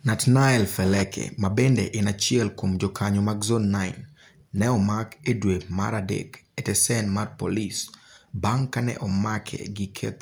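Nothing in this recording of speech stands out as a technical fault, so there's nothing here to flag.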